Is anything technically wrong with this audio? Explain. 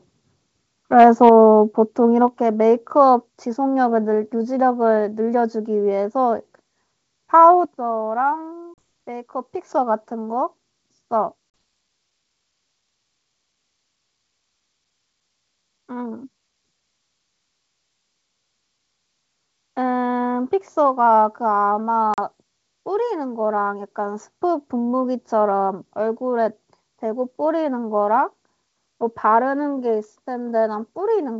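Yes, there are three kinds of problem in this speech recording.

First, microphone overload from 0.99 to 1.29 s. The peaks push about 2 dB past full scale, so a few percent of the samples have their tops flattened off. That gives the loudest syllables in that stretch a gritty, crackly edge. The likely cause is the mic input gain being set too high, so the converter simply runs out of headroom.

Right after that the microphone volume steps down, three times: at 1.29 s by about 4 dB, at 2.28 s by about another 4 dB, and at 7.65 s by about 7 dB. Each one is an abrupt drop in level, and the speech and the background fall together, so it's not the talker getting quieter. It likely comes from the call software reacting to that clipping and cutting the device's input gain in single jumps instead of easing it down.

Then there's packet loss on the ADPCM call at 8.74, 11.50 and 22.14 s. Each gap is 40 ms of hard-edged silence, which fits a couple of packets going missing. 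ADPCM codes each sample relative to a running prediction and an adaptive step size. Once packets vanish, the receiver's state no longer matches the sender's. So after each hole the speech comes back slightly distorted, then settles within tens of milliseconds.

The G.722 wideband coding underneath is running at 64 kbit/s with no more than faint codec damage.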